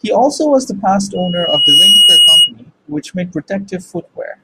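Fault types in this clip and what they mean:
Loudspeaker feedback squeal: the mic is picking up its loudspeaker, and around 2.9 kHz the loop gain tops one, so it feeds itself. After "also was the past" a tone swells over about three quarters of a second to roughly 10 dB above the speech, then stops before "which made".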